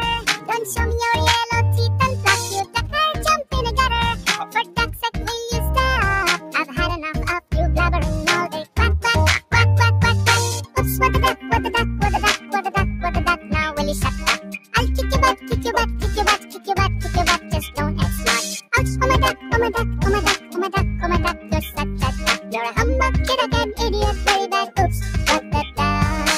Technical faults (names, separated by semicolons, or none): noise suppressor applied to music or sounds; sound cut by the noise suppressor